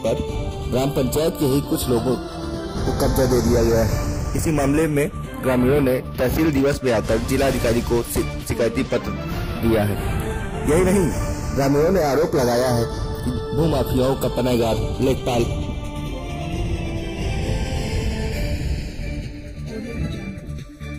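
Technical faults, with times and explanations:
Throughout, channels drifting apart: when the two sides are heard together or folded to mono, a slow flanging sweeps through the sound, with hollow notches gliding gradually across the spectrum. The left and right channels were captured on devices running from separate clocks, off by roughly 40 ppm, so the time offset between them creeps steadily, reaching about half a millisecond by the end. That sliding delay moves the comb-filter notches continuously, producing the gentle swirling effect.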